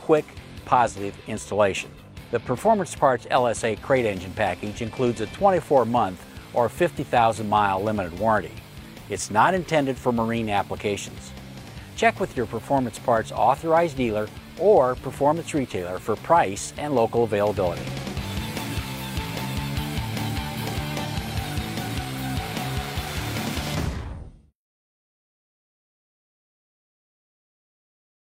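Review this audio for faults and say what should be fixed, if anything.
Nothing here needs fixing, as no technical faults turn up anywhere in the recording.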